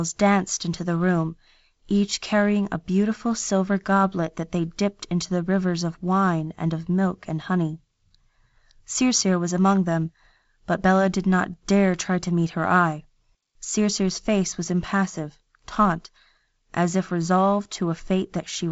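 Nothing is technically wrong with this speech clip. It carries the sound of G.722 wideband telephone coding at 48 kbit/s, with the band ending near 7.7 kHz and only a light layer of coding noise that this lower bitrate leaves on the sound.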